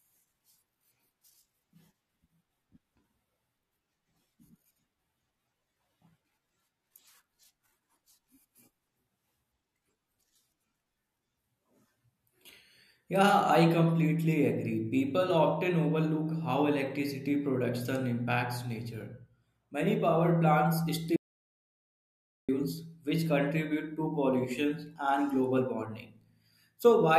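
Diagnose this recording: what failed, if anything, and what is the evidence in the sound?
The capture input was likely lost while the recorder wrote zeros, an audio dropout to silence from 21.16 to 22.49 s. The speech is cut by 1.32 s of total silence with no room tone, resuming at "which contribute".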